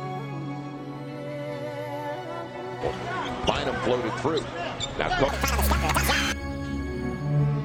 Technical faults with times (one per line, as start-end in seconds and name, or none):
5.28-7.65 section at the wrong speed